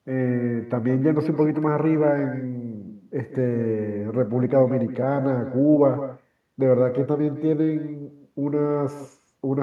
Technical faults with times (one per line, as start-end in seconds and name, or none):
0.00-9.62 echo with no canceller